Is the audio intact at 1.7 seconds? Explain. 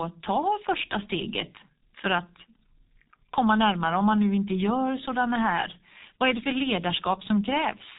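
No. G.723.1 codec damage runs through the whole clip. It codes speech in coarse 30 ms frames and strips everything above 3.8 kHz, leaving speech muffled and hoarse with blurred consonants.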